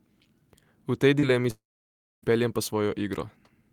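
Short concealed packet loss at 1.19 to 1.25 s in this speech recording: about 40 ms of audio failed to reach the decoder in time, and the receiver covered roughly 31 ms of the gap by extending the preceding sound before crossfading back into the real signal. It comes across as a quick smear or wobble rather than a clean cut, with a brief moment of the speech blurred over. Long network dropout at 1.50 to 2.25 s: the audio stops for about 0.72 s. A short continuation of the last sound decays away, then roughly 0.61 s of near-silence follows before the speech resumes further on, with nothing of the intervening stretch recovered. This is likely a network outage in which no packets arrived for that whole span, so the concealment could only extend and then fade the final fragment before giving up.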